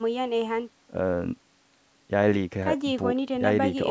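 Nothing here stands out as a fault: the speech simply carries the usual character of call microphone processing, with the lowest bass trimmed away and nothing above 8 kHz, which is just how that path sounds.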